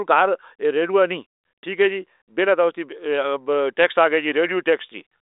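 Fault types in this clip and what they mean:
Nothing here counts as a fault: the speech comes over a telephone-width channel of roughly 300 Hz to 3.7 kHz, with nothing above 3.8 kHz, and that narrow band is just how the line carries it.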